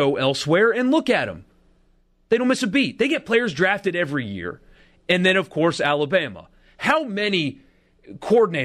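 A brief, fairly quiet glitch cuts into the speech from 3.19 to 3.22 s, just before "players drafted every year", peaking around -30 dBFS. It is a corrupt frame decoded: flipped bits in roughly one compressed frame put energy at the wrong frequencies.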